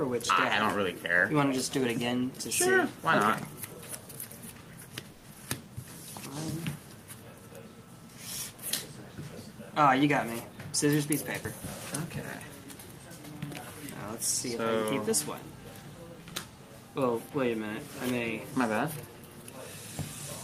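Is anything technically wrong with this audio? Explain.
Yes, there are jitter-buffer problems. From 5.11 to 5.25 s there is a call audio freeze. The last sound is held and stretched as a fading buzz for about 120 ms, which likely means packets stalled and the buffer ran dry. On a spectrogram it shows as smeared horizontal bands.

At about 5.33 to 5.36 s comes a short concealed packet loss. About 40 ms never arrived and only a brief patch was synthesised, so a brief smear or wobble is heard.

A jitter buffer slow-down follows from 5.39 to 5.67 s. Repeated pitch periods add about 37 ms and the audio plays at 90% speed with the same pitch. Stretched, evenly repeated cycles are visible.

Jitter buffer speed-up occurs from 10.45 to 11.62 s at 106% and from 12.09 to 12.65 s at 105%. Short pieces were trimmed to cut the delay, roughly 70 ms and 40 ms, so the sound is hurried and compressed spectrogram features appear.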